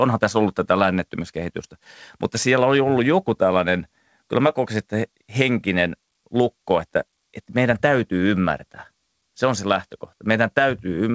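Nothing in here stands out as a fault; the speech simply comes through a call path whose wideband codec leaves nothing above 8 kHz, which is just how that kind of link sounds.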